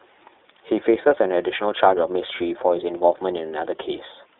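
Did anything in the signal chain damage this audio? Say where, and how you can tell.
Yes, at the codec: iLBC throughout, nothing above 3.7 kHz, and a gritty synthetic edge from coding each 30 ms frame independently.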